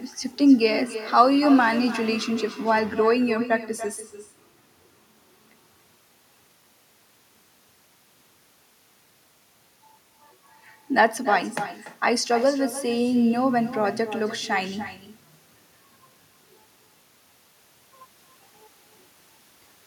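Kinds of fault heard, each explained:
Echo with no canceller: throughout the speech, a distinct copy returns roughly a third of a second later, about 12 dB quieter and thinner, unlike reverberation's smooth tail.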